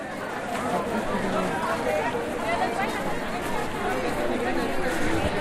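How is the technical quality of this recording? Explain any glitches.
No glitches can be heard in this recording of sounds. Nothing in it calls for explanation.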